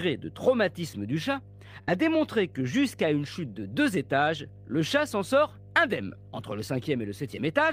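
A steady mains hum at 50 Hz runs under the speech from start to finish, sitting roughly 20 dB below it. A ground loop or nearby transformer is leaking the power-line frequency into the signal path. Unlike broadband low-frequency rumble from handling or wind, this is a fixed, pitched drone with some low harmonics above it, and its level and pitch never change with the speech.

From 1.81 to 1.90 s, right after "de traumatisme du chat", a burst of packet loss interrupts the speech. About 60 ms of audio never arrived in time, so the receiver extended the last sound for roughly 60 ms and faded it, giving a brief held, decaying sound before the speech picks up at "démontré que jusqu'à une". What separates this from a plain dropout is that the gap is filled with a stretched, fading echo of the preceding sound rather than silence, and speech resumes slightly further on rather than where it stopped.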